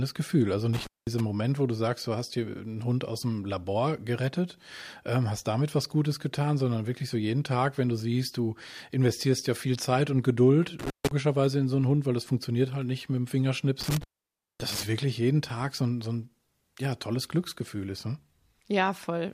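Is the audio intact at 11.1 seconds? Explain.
No. An intermittent contact disturbs the speech from 10.79 to 11.11 s, ending just before "in so einen". A loose connection breaks the signal path for about 150 ms. The sound drops out, crackles at each edge, and leaves faint hiss during the gap.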